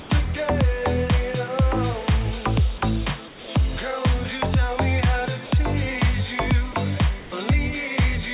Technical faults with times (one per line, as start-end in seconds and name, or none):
0.00-0.10 comfort noise in place of the background
3.28-3.48 comfort noise in place of the background
5.46-5.52 sound dropped by the voice detector
6.72-6.74 sound dropped by the voice detector
7.20-7.32 comfort noise in place of the background